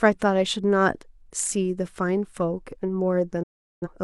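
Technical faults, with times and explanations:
3.43–3.88 s digital broadcast dropout: the receiver muted on failed frames with an 8 ms fade-out, leaving a flat waveform and a blank vertical spectrogram gap.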